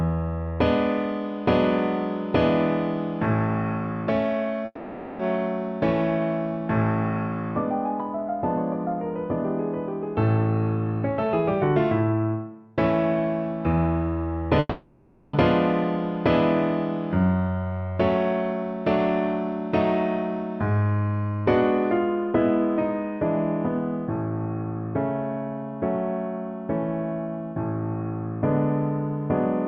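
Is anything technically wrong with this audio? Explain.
Yes. There are two breaks, at 4.65 to 5.21 s and at 14.59 to 15.35 s, most likely a long network dropout. The last sound is stretched into a fading buzz (about 0.54 s, then 0.74 s) before a brief silence and a resumption with the missing audio gone. A spectrogram shows smeared, decaying bands ending in a narrow gap. The waveform shows a tapering envelope.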